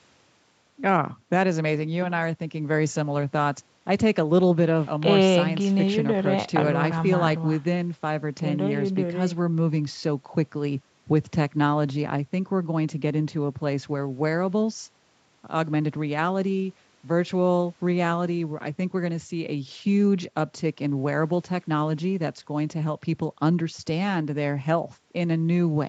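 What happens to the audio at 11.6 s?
Nothing goes wrong at 11.6 s: the speech carries on intact through that moment, with no dropout, glitch or distortion.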